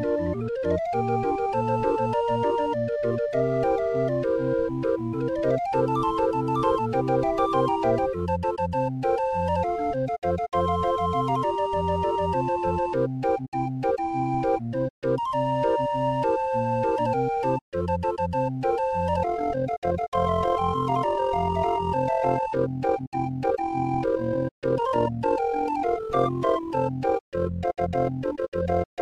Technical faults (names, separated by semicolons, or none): overlap-add ripple